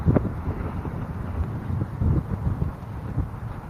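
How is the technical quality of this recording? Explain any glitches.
No glitches can be heard anywhere in the recording. The audio runs without dropouts, clicks or other interruptions.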